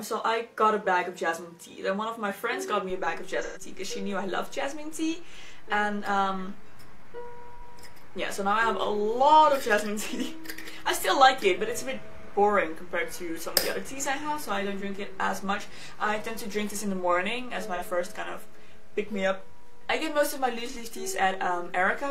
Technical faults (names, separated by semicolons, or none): AAC frame loss with concealment